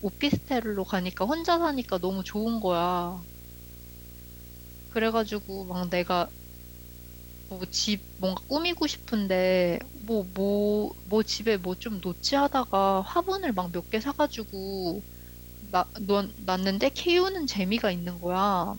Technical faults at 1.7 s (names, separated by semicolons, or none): video or display buzz